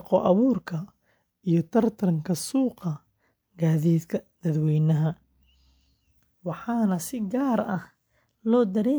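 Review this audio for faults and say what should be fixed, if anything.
Drift correction step at 0.78 to 2.81 s. The speech slows by 5.76% and drops about a semitone, then snaps back. From 7.67 s to the end, it speeds up by 5.76% and rises about a semitone. This is likely clock-matching software jumping its playback rate to rebalance its buffer. Prevent it by having the rate correction move in small, gradual increments instead of single steps.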